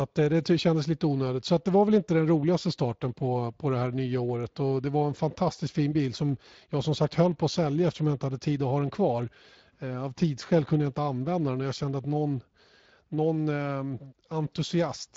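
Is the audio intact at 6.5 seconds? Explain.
No. At 6.5 seconds the speech sounds noisy and hoarse, and the damage is plainly audible. This is Speex codec damage, present through the whole clip rather than at one moment. Speex is a CELP coder that models the vocal tract and spends its limited bits on the excitation signal. The degradation fits a setting around 20 kbps, where that excitation is coded too coarsely to carry the natural detail of the voice.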